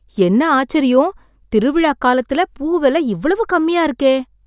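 No technical faults can be heard anywhere in the speech recording. There are no dropouts, glitches or other events to mark at any point in time.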